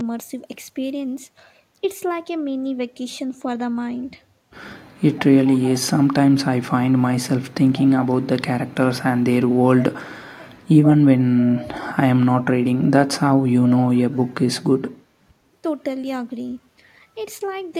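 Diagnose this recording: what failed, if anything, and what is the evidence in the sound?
Call processing is where this fails: a faint delayed copy of the speech comes back twice, briefly from 9.80 to 9.84 s and again from 11.41 to 11.68 s, trailing the original by 128 ms and sitting roughly 15 to 20 dB below it. This is likely echo leak, with a far-end echo canceller letting loudspeaker pickup through. Room reverberation would decay smoothly; this is a discrete repeat at one fixed lag.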